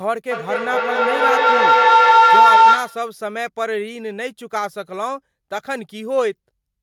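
From 0.31 to 3.15 s a feedback howl builds around 1 kHz, pulsing about every 200 ms, peaking about 12 dB over the speech as the loop keeps gaining.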